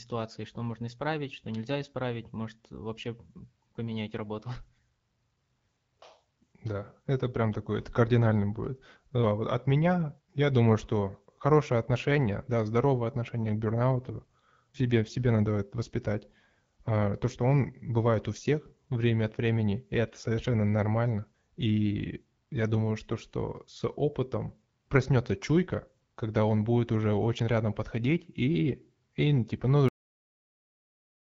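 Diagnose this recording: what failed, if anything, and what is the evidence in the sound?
What failed is the tail end, at the buffer or storage stage: a cut-off end. Right after "и типа ну" the speech stops dead at 29.89 s, mid-sound, into flat digital silence with no decay. The final buffers were never written out, so nothing follows the cut.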